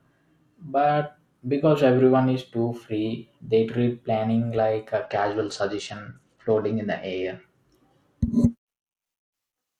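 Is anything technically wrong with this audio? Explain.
Yes. From 5.05 to 7.43 s, right after "treat planning like a", the speech shows a Bluetooth SBC bit pool drop. The degradation fits the sender cutting the SBC bit pool from 28 to 10, roughly 84 kbps, to keep a congested link alive. With so few bits, the highest sub-bands get little or nothing and the rest are coarsely quantised. The speech turns dull and loses its treble, with a gritty noise underneath until the rate recovers.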